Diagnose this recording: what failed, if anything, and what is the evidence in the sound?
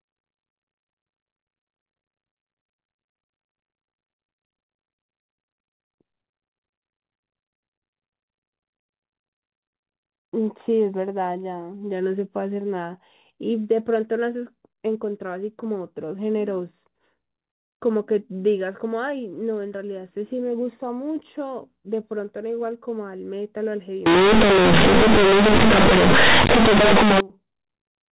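The failure sits at the sample-format conversion stage: from 24.06 s to 27.20 s the speech turns into very loud, buzzy distortion, with pauses filled by harsh noise. This is companded audio read as linear. The mu-law telephone bytes, correct and band-limited below 4 kHz elsewhere, are played as plain linear 8-bit samples without expansion, so every sign change throws the output across half its range. Unlike ordinary clipping, quiet passages and silences become as loud as peaks.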